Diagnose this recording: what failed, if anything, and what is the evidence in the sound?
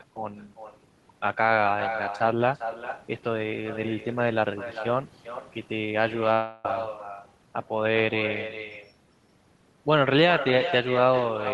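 Each phrase of the speech is shadowed by a quieter, thinner copy roughly four tenths of a second later, about 9 dB below the direct sound. This is echo with no canceller in call processing: the far end's loudspeaker leaks into its microphone, and nothing subtracts it.

From 6.33 to 6.65 s the speech turns into a continuation of the last sound that fades without ever reaching silence. The speech then resumes further along, with that stretch missing. This is likely a long network dropout, with the receiver concealing the gap in the Opus stream.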